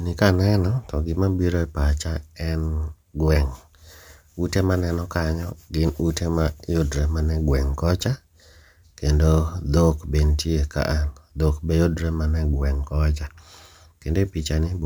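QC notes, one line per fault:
Throughout: crude rate conversion. There's a gritty, inharmonic fizz riding on the speech, loudest on strong and bright sounds, roughly 30 dB down. It sounds like samples were just repeated to stretch the rate, which fits a 32 kHz to 48 kHz step, so the error repeats and throws off unrelated tones.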